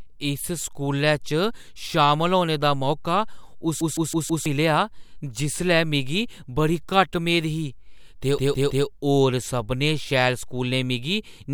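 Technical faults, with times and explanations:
3.81–4.46 s and 8.38–8.87 s, CD stuck on one turn: the same 0.16 s slice of speech plays four times in the first run and three in the second, with a brief mute at each jump. A scratch sends the laser back one track at the same point on each rotation, so the playback loops one revolution's worth of audio. This produces the fast, even stutter of a skipping CD.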